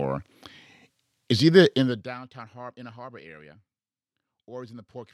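From 1.76 to 2.14 s, zipper noise: the speech level drops about 25 dB in 1 dB steps, about a hundred per second, so regular ticking rides the fade, unlike a single click.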